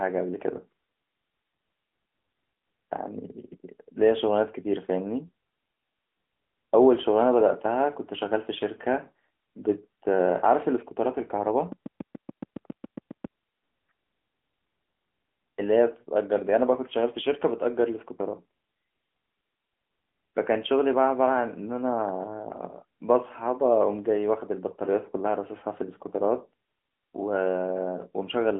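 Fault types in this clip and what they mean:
AMR narrowband mobile codec: The speech has been through AMR-NB, the narrowband codec of 2G and 3G mobile calls. It models the vocal tract and drives that model with a few pulses per short subframe, rather than keeping the waveform itself. Nothing above about 3.6 kHz survives, and the sound sits in a phone-line band of 200 Hz to 3.4 kHz. The coding damage is plainly audible throughout, a thin, synthetic quality that fits a mid-rate mode near 10.2 kbps.
Train of clicks: From 11.72 to 13.26 s, a run of roughly ten clicks ticks over the speech. They come at a steady 7.2 per second, evenly spaced, and all have much the same shape. The loudest rise a few decibels above the speech itself. Such a regular, repeating pulse is likely interference from nearby equipment or a faulty connection or power supply.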